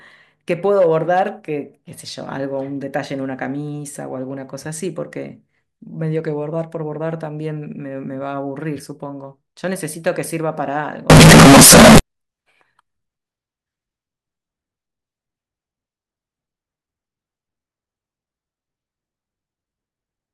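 From 11.10 to 11.99 s the speech turns into very loud, harsh distortion. Quiet moments blast too. Signed and unsigned are likely mixed up in the 16-bit samples.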